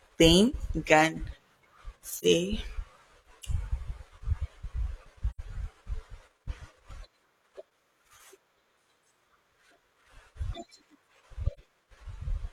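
AAC frame loss with muting: the decoder receives nothing for stretches of about 43 ms, or 85 ms at 5.30 s, fitting one or two lost frames, and zeroes them. The speech fades into soft-edged gaps at 2.17, 5.30, 7.66 and 11.53 s.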